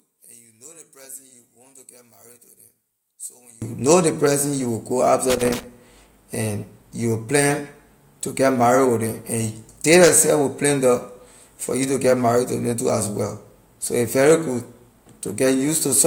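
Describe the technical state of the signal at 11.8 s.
At 11.8 s the speech signal is intact, with no audible fault at that moment.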